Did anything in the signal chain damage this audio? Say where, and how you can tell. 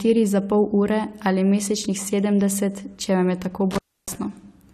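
Yes. The analogue wiring shows an intermittent contact between 3.71 and 4.15 s, right after "če vam je tako": the speech drops out for about 295 ms, with crackle at each edge and faint hiss in the gap, as a loose plug or cable briefly opens the line.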